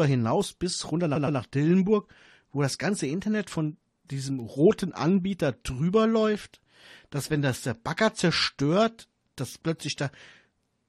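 At 1.15 to 1.38 s, repeated frames replay a 116.1 ms block twice more, a stutter adding 232 ms; the spectrogram shows an identical pattern tiled side by side. Bit error spikes at 4.40 s, just after "von diesem", and 9.51 s are brief jumps that flip one binary digit, lasting two samples. Each sounds like a sharp tick and appears as a lone waveform spike and a thin full-band vertical line.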